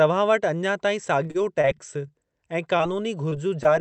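From 1.23 to 1.65 s the speech turns choppy, with four short holes, the longest about 32 ms. This is repeated packet loss: audio kept arriving late or not at all, and each gap was patched by extending the previous sound, so about a fifth of the stretch is synthetic fill.

Right after, from 1.74 to 2.08 s, the speech drags, running at about 90% speed with unchanged pitch and drawn-out sounds, adding 42 ms. This is a jitter buffer slow-down: the receiver repeated single pitch periods to rebuild its reserve after running short or raising its target delay.

Three brief smears follow, at 2.78–2.81 s, 3.29–3.33 s and 3.63–3.68 s, each a quick wobble where a sliver of sound blurs. Each is a short concealed packet loss, with about 20 ms of audio missing and patched by continuing the preceding sound before blending back into the real signal. The last one stretches the timing by a few milliseconds.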